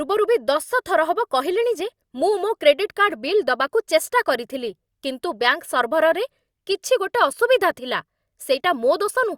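A short bit of speech, and there's nothing technically wrong to point to anywhere in it.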